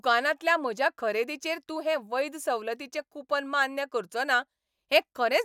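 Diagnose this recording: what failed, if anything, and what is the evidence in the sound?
Nothing in the chain from capture to playback has failed, and the speech signal stays continuous and undisturbed throughout the recording.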